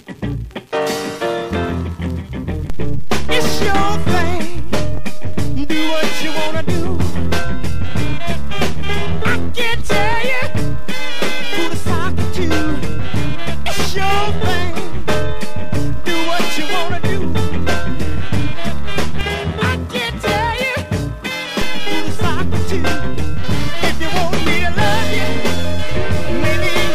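A DC step shifts the waveform's zero line by about -10 dBFS at 2.70 s, returning at 19.21 s, then again at 21.62 s through the end. Each jump gives a low thump, drawn as an offset baseline and a brief broadband smear at the step.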